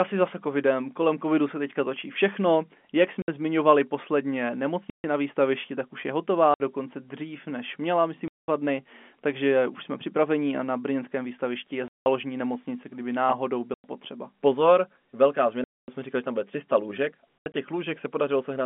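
Packet loss filled with silence chops the speech at 3.22, 4.9 (after "zmiňovali posledně"), 6.54, 8.28, 11.88, 13.74, 15.64 and 17.4 s. Gaps run 20 to 240 ms in steps that fit 20 ms packets, with hard edges, all over a narrow telephone band.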